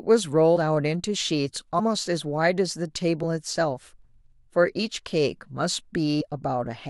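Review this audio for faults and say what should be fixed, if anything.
Compressed frames skipped: at four points the decoder never played whole frames of this speech, either because they were missing from the file or rejected as corrupt. Playback jumps ahead at 0.55 to 0.57 s and 1.78 to 1.80 s (about 70 ms lost each), at 3.22 s (about 50 ms) and at 6.20 to 6.22 s (about 100 ms). These gaps fit a few frames each. To prevent it, re-encode from an intact source and check the file's frame integrity before delivery.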